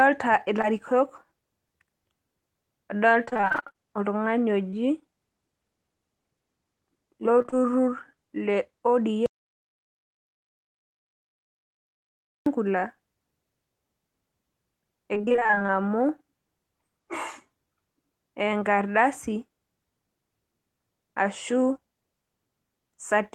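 At 0.61 to 0.65 s there is a short concealed packet loss. About 20 ms of audio never arrived in time, and the receiver bridged the hole by extending the preceding sound before crossfading back. It registers as a tiny smear or wobble. On a spectrogram the harmonics run unnaturally smooth for a few frames, and the waveform shows a repeated cycle shape where fresh detail should be. The same thing recurs at 4.71 to 4.75 s, where the patch also stretches the timing by a few milliseconds.

From 3.25 to 3.77 s the sound turns choppy and metallic. This is repeated packet loss, the robotic sound: the pattern fits roughly a dozen separate gaps, none longer than 25 ms, together covering nearly half the span. Each loss is patched by continuing the last sound, and the next one arrives before recovery. A spectrogram shows a comb of short blurred blocks interrupting normal texture. Further bursts of the same damage follow at 7.39 to 7.61 s, with a handful of gaps covering about half that stretch, and at 15.15 to 15.70 s, with a denser run of short holes over nearly half the span.

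Between 9.26 and 12.46 s the audio drops out to silence for about 3.2 s. It cuts off abruptly and resumes mid-flow. The gap holds no room tone at all, so the waveform is a flat line and the spectrogram is a black band across all frequencies. The likely cause is a lost input, such as a disconnected device or a failed link, while recording continued.

Straight after the last robotic burst, from 15.71 to 16.24 s, a jitter buffer slow-down sets in. The receiver was rebuilding its reserve, so it repeated single pitch periods and stretched the audio by about 52 ms. Playback runs at about 91% speed with unchanged pitch, and sounds are slightly drawn out. On a spectrogram the harmonics stay level while segments lengthen, and the waveform shows near-identical cycles copied side by side.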